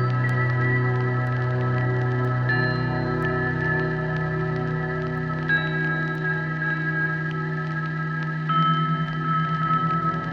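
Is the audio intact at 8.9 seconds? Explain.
No. The moment at 8.9 s falls inside a run of word clock ticks lasting from 0.29 s to 10.05 s. A receiving device on its own unlocked clock drifts by roughly 20 ppm against the sender, so about once a second a single sample is dropped or repeated. The result is a sharp, uneven tick, about ten in all. A spectrogram shows thin vertical broadband lines spaced about a second apart, and the waveform shows a one-sample step at each.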